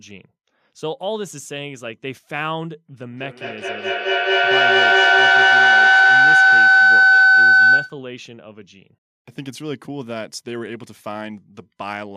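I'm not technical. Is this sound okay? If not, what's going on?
No. From 3.01 to 8.05 seconds there's feedback howl: two devices in one room on the same call keep picking up each other's output. Each loop, coming round roughly five times a second, gets louder, building into a shrill whistle around 1.5 kHz.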